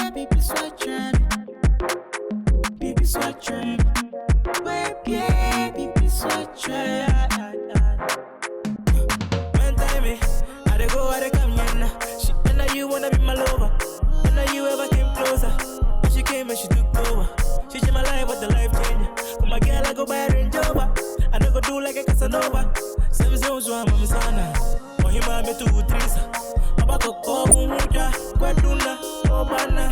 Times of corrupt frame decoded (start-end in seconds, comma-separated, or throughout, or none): 20.75-20.78, 27.49-27.54